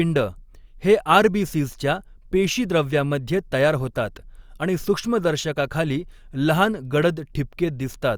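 Listening to the speech recording, nothing stood out as a technical problem at any point.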